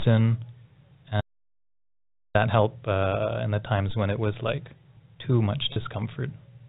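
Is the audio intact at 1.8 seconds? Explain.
No. At 1.8 s the clip sits inside an audio dropout to silence running from 1.21 s to 2.35 s, so roughly 1.14 s of speech is missing. The sound cuts off abruptly and the gap is silent, with no room tone or noise floor, which is most likely a lost input or a momentary disconnection while the recorder kept writing empty samples. The speech resumes mid-flow on "help uh in the."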